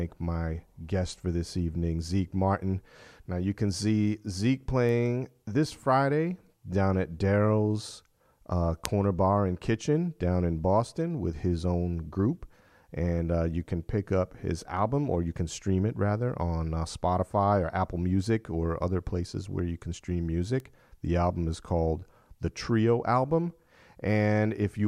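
Sharp, isolated ticks at 4.89 s (about −28 dBFS), 8.85 s (a loud one, about −4 dBFS) and 20.60 s just after "where you can stream" (about −22 dBFS) are bit error spikes: a flipped bit momentarily throws a sample's value off by a power of two.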